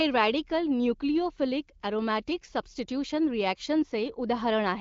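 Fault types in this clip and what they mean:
No faults can be heard in this speech recording.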